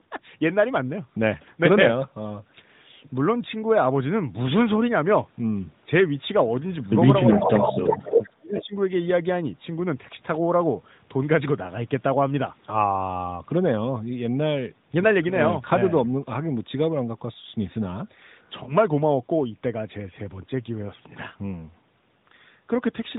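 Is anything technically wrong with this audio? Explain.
Yes. There are three kinds of fault.

Echo leak occurs at 6.71–6.87 s, 7.27–8.29 s and 8.57–8.79 s. A copy of the speech returns about 0.36 s late. It is faint at first, then nearly as loud as the speech, then about 10 dB down. The likely cause is an incomplete echo canceller on a loudspeaker end.

Speech suppressed in double talk occurs at 7.33–7.74 s, during the loud echo. The talker dips by up to about 10 dB, in pieces totalling roughly 0.3 s. The likely cause is the canceller turning everything down.

Lost AMR speech frames occur around 18.64–18.75 s. There is a brief dip or warble, consistent with one missing 20 ms frame that the decoder concealed. The sound comes back rough for a moment. The narrowband band limit, with nothing above 4 kHz, is audible throughout.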